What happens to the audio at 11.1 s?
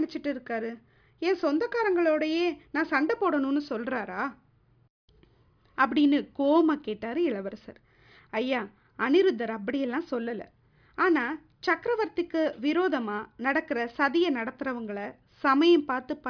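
Nothing goes wrong at 11.1 s: the speech runs on intact through that moment, with no dropout, glitch or other audible fault.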